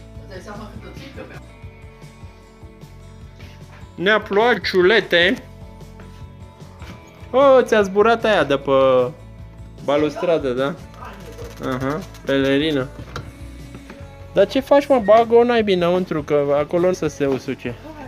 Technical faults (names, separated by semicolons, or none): compressed frames skipped